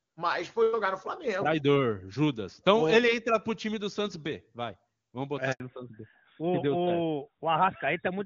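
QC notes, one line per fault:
5.52 to 5.60 s, handover gap: the speech cuts out for about 80 ms as the call switches networks. No speech frames reach the decoder during the switch, so the sound decays within a few tens of milliseconds and stays silent until the new link carries audio.
5.60 s to end, fallback to narrowband: from the handover onward, nothing above 4 kHz remains. Before the switch, the wideband HD Voice codec extended clearly into the upper band, consistent with its top rate. Afterward, the speech sounds duller and rougher, which fits a drop to AMR-NB at 12.2 kbit/s.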